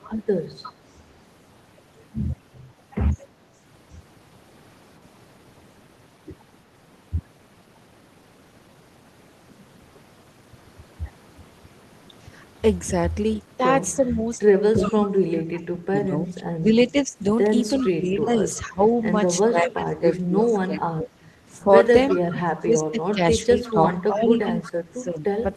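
A speech clip with four kinds of trouble. There's echo leak in several spots: a delayed copy of the voice trailing 356 ms behind, at 0.03–0.73, 14.09–15.07, 17.79–18.59, 20.13–20.18, 22.09–22.16 and 23.63–24.69 s, sitting roughly 10 to 30 dB under the speech (loudest near 14.1 s). It's likely a far-end loudspeaker whose echo canceller didn't fully remove what its mic picked up. At 7.63–7.65 s there's a skip ahead: about 0.7 s of audio is simply gone, with the two sides butted together and no fill, so playback lurches forward. Right after, from 7.73 to 9.05 s, a jitter buffer speed-up kicks in. The speech runs at 115% speed with the pitch unchanged and sounds hurried, as the receiver trims short pitch-period chunks, shaving around a fifth of a second to pull its delay back down. From 13.96 to 25.41 s the talker keeps dipping, for roughly 5 s in total and by up to about 20 dB. That's likely speech suppressed in double talk, with the canceller ducking everything while the other side talks.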